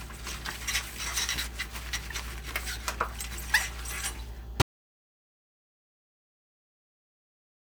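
At 4.62 s the input feeding the recorder was likely lost, whether through a disconnected device, a broken link or an accidental mute, while writing carried on with nothing but silence. The result is an audio dropout to silence: the sound stops abruptly in mid-flow and never returns, leaving dead digital silence with no room tone or background through to the end of the clip. Whatever happened after that moment is gone.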